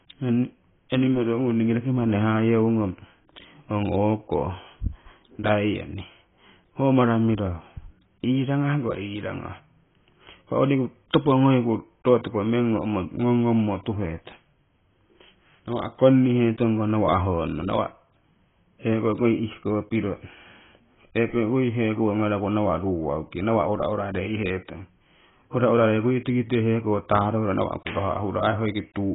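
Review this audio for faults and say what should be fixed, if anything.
Heavy AAC compression runs throughout the speech, likely from an AAC-LC encoder starved of bits, at a rate that fits about 16 kbps. It has discarded everything above 3.8 kHz and quantised the remaining spectrum coarsely, so the sound is dull and smeared, with a warbling, fizzy texture on sibilants. Encode speech at 64 kbps or more, or keep an uncompressed master for any re-encoding.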